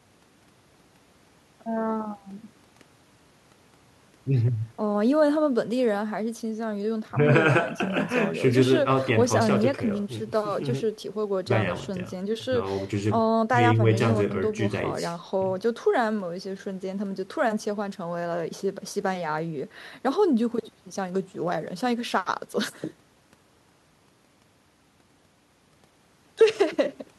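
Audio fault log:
No faults were detected anywhere in this speech recording, so nothing is logged against it.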